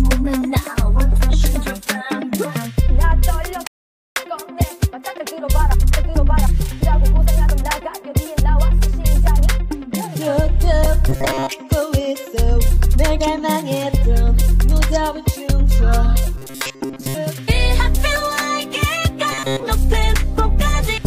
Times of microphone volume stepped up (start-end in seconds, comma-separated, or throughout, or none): none